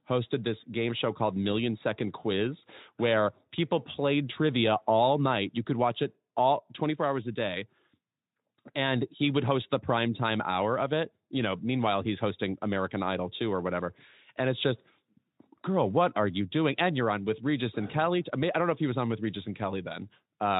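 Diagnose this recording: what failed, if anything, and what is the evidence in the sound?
Nothing in the recording stood out on listening as a failure at any stage.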